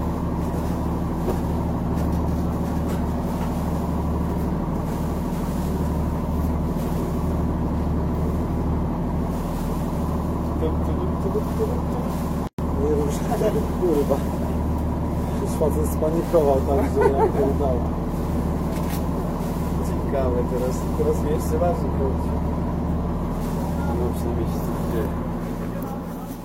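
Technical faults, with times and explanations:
12.47 to 12.59 s, gap at a join of encoded pieces: a gap of about 113 ms cuts into continuous sound, then the sound resumes where it stopped. Separately encoded pieces were joined untrimmed, leaving encoder delay and padding. Spectrogram and waveform show a blank vertical band with smeared edges.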